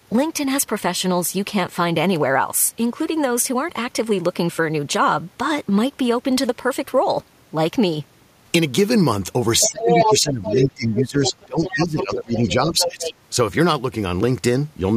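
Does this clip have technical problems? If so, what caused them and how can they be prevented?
Yes. Other side's voice leaking through: the echo canceller likely failed to cancel the loudspeaker's sound, so the far voice appears at 9.6–10.2 s (about as loud as the talker), then 10.45–10.66, 10.97–11.04, 11.24–11.45, 11.65–12.03, 12.34–12.51 and 12.78–13.14 s, about 5 to 15 dB quieter than the talker. Headphones or a better-placed loudspeaker, with the microphone further from it, would prevent this.

Speech suppressed in double talk: with both sides talking, the canceller likely could not separate the talker from the echo, so from 9.64 to 13.08 s the talker's voice dips by around 15 dB in places. A canceller with proper double-talk detection, or a headset, would prevent this.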